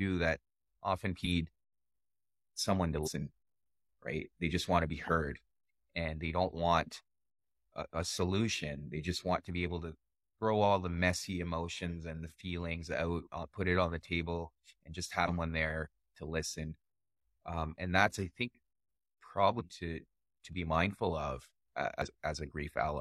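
A speech clip with damaged data in a compressed stream, heard as five short disruptions of roughly 50 to 70 ms at 1.21 s after "that often", 3.02 s after "someone to", 15.24 s between "the table and just" and "there to listen", 19.56 s and 22.02 s. Corrupted bytes make the decoder misread frames and lose sync until it finds the next header.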